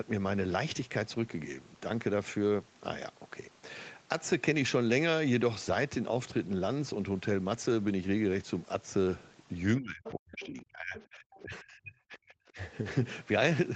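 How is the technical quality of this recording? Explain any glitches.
The recording has two related glitches, both between about 9.8 and 12.6 s, where the talker and the far end of the call overlap.

Speech suppressed in double talk, 9.78 to 12.58 s: The echo canceller likely could not tell the talker's own voice apart from the loudspeaker echo while both sides spoke, so it turned everything down. The talker's voice dips and breaks up across roughly two seconds of that window, sinking at its deepest by around 35 dB before recovering.

Other side's voice leaking through, at 10.04, 10.4 and 10.96 s: The far-end voice playing on the talker's loudspeaker was likely not fully cancelled from the microphone signal. It comes through as three short scraps lasting a few tens to a couple of hundred milliseconds, sitting roughly 15 to 20 dB below the talker. These sound like faint fragments of a second voice, heard inside the stretch where the talker's own speech is being pulled down.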